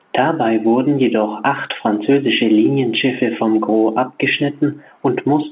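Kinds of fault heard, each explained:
No faults detected; the speech arrives over an 8 kHz A-law telephone path with its expected narrow bandwidth and low-level companding noise.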